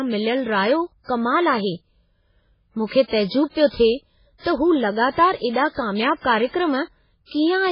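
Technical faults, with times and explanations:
Throughout, MP3 compression: nothing reaches above 5.3 kHz, so the speech sounds dull and s sounds lose their hiss. Weak frequency lines flicker between frames, giving a watery, swirling texture and smeared attacks. The heavy damage likely reflects a very low bitrate, around 16 kbps.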